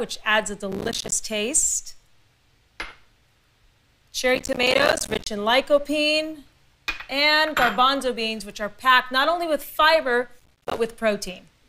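Processor overload crackle occurs at 0.72 to 1.12 s, 4.35 to 5.27 s and 10.40 to 10.78 s. Repeatedly missed processing deadlines leave hard-edged silent gaps, consistent with buffers of around 5 ms, heard as gritty crackling bursts over the sound.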